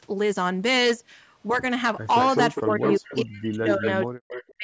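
Speech recorded through call microphone processing, whose band stops at 8 kHz, and it carries hard clipping from start to finish. The signal drives about 8 dB past what the chain can pass, so a few percent of samples are cut off flat at the ceiling. Those squared-off peaks add harmonics high in the band. Over the second half there is echo leak: a delayed copy of the sound, trailing by 205 ms, appears at 2.23 to 2.39 s, 2.55 to 2.62 s, 2.82 to 3.16 s, 3.70 to 3.88 s and 4.29 to 4.43 s, sitting roughly 5 to 15 dB under the direct speech. That is likely a loudspeaker on the far end whose echo canceller let part of its own playback back into the microphone and return it. Overlapping this, the main speech is speech suppressed in double talk from 2.64 to 3.86 s and again from 4.06 s to the end, where it drops by as much as roughly 40 dB. Together the dips add up to around 1.4 seconds. The likely cause is an echo canceller facing simultaneous talk that could not tell the talker apart from the returned echo and pulled down everything in those moments.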